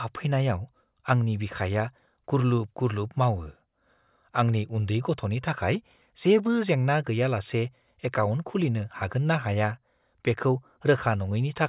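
No technical faults are audible anywhere in this recording.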